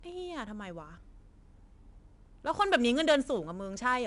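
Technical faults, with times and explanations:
Throughout, 4-bit ADPCM compression: coarse 4-bit prediction steps leave plainly audible gritty hiss tracking the speech level, with nothing above 10.7 kHz, which fits an 89 kbps stream.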